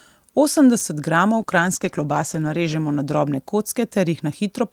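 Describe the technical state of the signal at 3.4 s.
A call bitrate drop is in effect at 3.4 s. It begins at 1.38 s and lasts to the end of the clip. The encoder's rate falls from 64 kbps to 14 kbps after the call's bandwidth estimate collapses. At that rate Opus quantises the speech far more coarsely and cuts away the upper frequencies. At 3.4 s the speech therefore sounds muffled and dull, with a rough, watery texture in place of the clearer sound heard before 1.38 s.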